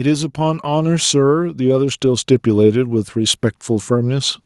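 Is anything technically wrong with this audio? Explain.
Yes. From 0.05 s to about 4.4 s the automatic gain control keeps pushing its gain upward. It has judged the incoming level too low and climbs slowly rather than settling, adding about 9 dB over roughly four seconds. This is automatic gain rising. Because the gain acts on the whole signal, the speech and the background noise grow louder together in a steady swell.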